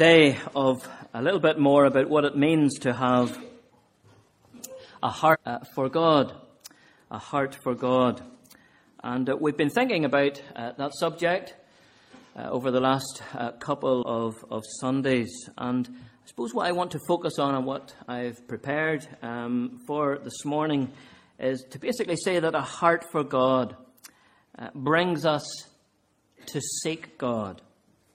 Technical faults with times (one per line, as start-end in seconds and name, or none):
5.30-5.37 compressed frames skipped
13.98-14.03 compressed frames skipped